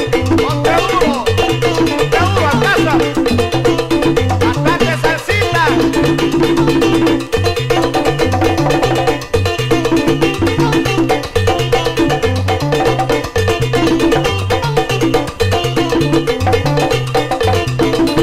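Nothing in the audio stood out as a technical problem on listening.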